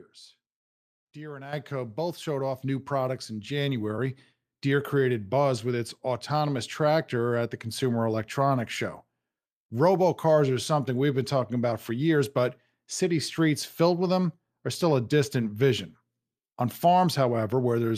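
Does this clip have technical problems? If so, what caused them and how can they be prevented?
Yes. The call software judged the microphone too quiet and raised the device's input volume in a single jump, a microphone volume stepped up fault at 1.53 s, just before "both showed". Because the change happens at the input, the speech and the background noise both become louder by about 10 dB at once, so the level steps up abruptly. Turning off automatic microphone adjustment in the call software and setting a fixed, adequate input level beforehand prevents this.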